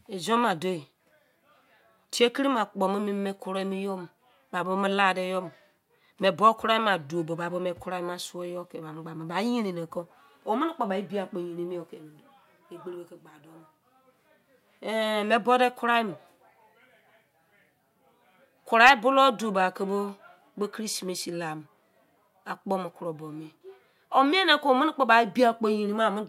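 No technical faults are audible anywhere in the speech.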